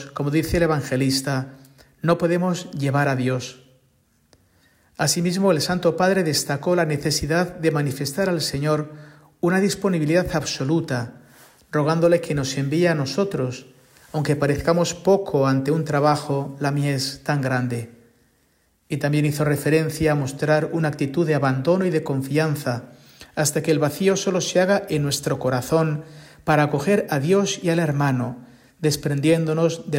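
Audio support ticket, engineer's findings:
No faults found on listening. Nothing in the playback points to a failing component or path.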